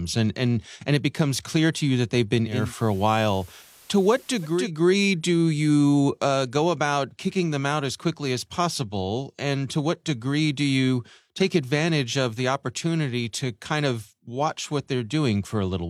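A speech clip in which a hybrid receiver drops its digital signal after "you that they've been" at 2.44 s and cross-fades over about 0.3 s to the FM broadcast. That digital radio blending to analogue lets hiss come up, roughly 30 dB below the speech, and shifts the level by about 1 dB until it blends back before "do you uh go" at 4.71 s.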